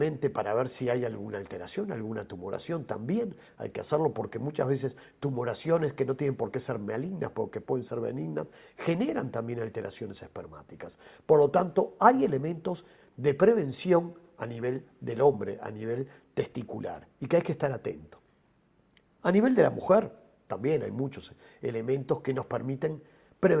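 Nothing here stands out as a technical problem; the audio just rolls along without a single glitch worth pointing at.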